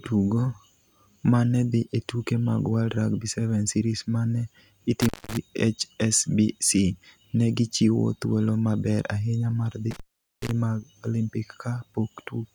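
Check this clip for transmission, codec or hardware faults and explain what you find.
Two hardware faults, both intermittent contact, at 5.01–5.37 s (about 200 ms open) and 9.91–10.51 s (about 430 ms open). A loose connection breaks the speech briefly, leaving faint hiss between crackling edges rather than the clean digital silence of a network dropout.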